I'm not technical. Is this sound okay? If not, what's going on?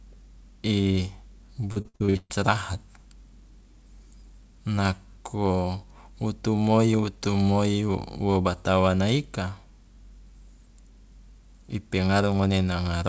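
No. From about 1.72 to 2.32 seconds the speech turns choppy and robotic, with small pieces missing. This is repeated packet loss (robotic sound). During a call, the audio travels in tiny chunks, and here chunks went missing or arrived too late seven separate times, one hole soon after another. Each time, the system filled the hole by stretching the last bit of sound it had. That filler made up about 60% of this short stretch, and the longest single gap lasted about 132 ms.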